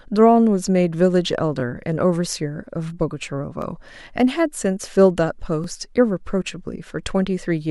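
A brief stutter breaks the speech at 1.60–1.62 s, 3.62–3.64 s and 5.64–5.66 s, spaced about 2 s apart. These are overlapping chunks: each 2 s block begins before the previous one ends, so roughly 21 ms of audio replays at every join.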